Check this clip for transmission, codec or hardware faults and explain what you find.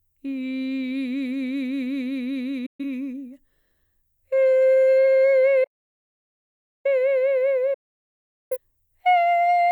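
Three faults turn up in this piece of music, two of one kind and one of another.

At 2.66 s and again from 7.74 to 8.58 s there's a digital broadcast dropout. The receiver stops getting frames it can trust and mutes until clean ones return. Each mute comes in over a quick 8 ms fade, not a hard click. The first hole is short, about 128 ms, which fits roughly three lost frames. The second runs about 768 ms, more like eighteen frames, and the music just picks up later in the programme.

From 5.64 to 6.85 s you get an audio dropout to silence, about 1.2 s of silence with no room tone or noise floor underneath. The cut is abrupt and the music comes back mid-flow. That pattern points to the input going away while the recorder kept writing. The likely cause is a disconnected source, a failed link or an accidental mute, and whatever played in that gap is gone.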